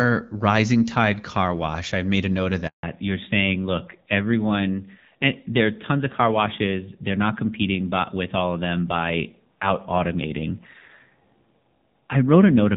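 Right after "made a note of", the speech cuts out abruptly at 2.67 s and stays silent until 2.83 s, a 160 ms hole where whatever was said is simply missing. That is a handover gap: the call was passed from one network to another, and no speech frames arrived while the link switched over, so the voice fades within a few tens of milliseconds and nothing returns until the new connection is up. When the sound comes back at 2.83 s it has changed character for the rest of the recording. It is duller, boxier and rougher, and nothing above 4 kHz is left. That is a fallback to narrowband. Before the gap the clip carries wideband HD Voice with light coding damage, consistent with AMR-WB at around 12.65 kbit/s. After the handover the call drops to the older narrowband AMR codec, which fits a rate near 7.4 kbit/s. That codec discards the upper band and models the voice more coarsely, which strips away sibilance and presence and adds a grainy edge.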